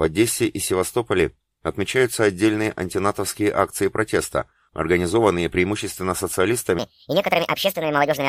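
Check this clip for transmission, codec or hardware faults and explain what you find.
One fault is present: a section at the wrong speed. From 6.79 s through to the end, the audio runs about 1.56 times faster than it should, which likely comes from playing or resampling that stretch against the wrong clock. Pitch and tempo rise together, so the sound jumps up by roughly seven semitones and turns hurried. On a spectrogram, harmonics and formant bands shift abruptly upward at 6.79 s. The waveform's events compress closer together in time.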